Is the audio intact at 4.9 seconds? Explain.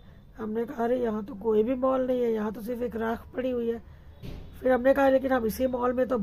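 Yes, the audio at 4.9 seconds is intact, with no fault or disruption at that moment.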